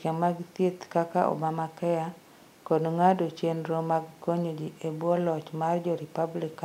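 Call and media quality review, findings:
Nothing stood out on listening to this speech clip.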